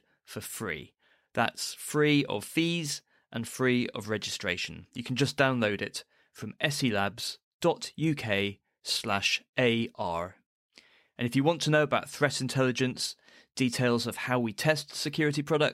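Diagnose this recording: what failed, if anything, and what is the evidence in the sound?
Nothing in this speech recording points to a failure at any stage along the chain, so there's really nothing here to diagnose.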